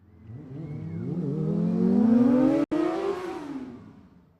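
A digital broadcast dropout at 2.64 to 2.72 s cuts this sound recording to silence for about 72 ms, with a roughly 3 ms fade. The receiver muted while frames failed, which fits about three lost frames, and the sound sent meanwhile is gone.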